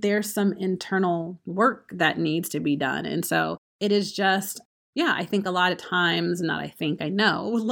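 Nothing in this recording stands out as a technical problem; it's all fine by ear.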